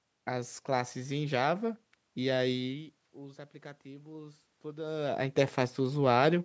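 From 2.65 s to 5.33 s there is automatic gain rising. The speech level at the microphone drops by about 17 dB as the talker moves away around 2.5 s, and the control slowly adds about 5 dB, so speech and room noise swell together.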